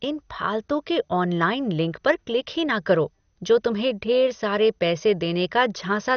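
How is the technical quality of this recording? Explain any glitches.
The quality is poor: the speech is dull and gurgly throughout. Likely MP2 compression at a low bitrate, around 48 kbps, switches off upper sub-bands and coarsely quantises the rest. A spectrogram shows nothing above 6.4 kHz, with flickering patchy bands below.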